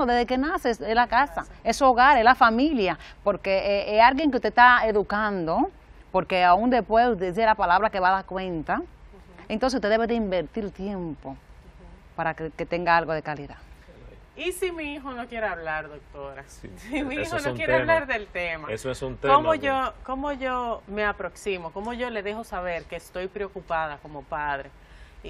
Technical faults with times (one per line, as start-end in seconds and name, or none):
none